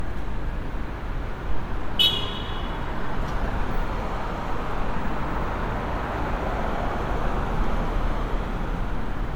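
All the way through, the sound has a swirly, hollow smear with softened attacks, worse than a single 128 kbit/s MP3 pass would leave. That's generation loss, likely from being MP3-encoded around seven times over, each pass stacking fresh quantisation noise, though content still reaches about 20.1 kHz.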